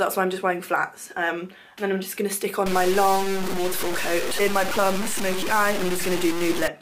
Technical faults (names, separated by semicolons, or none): low bit depth without dither